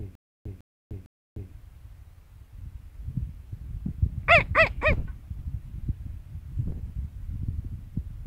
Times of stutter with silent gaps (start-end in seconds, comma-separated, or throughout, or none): 0.00-1.51